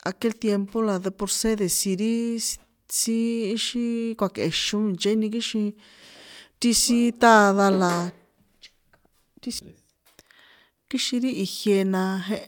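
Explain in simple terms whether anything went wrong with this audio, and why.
Nothing went wrong here.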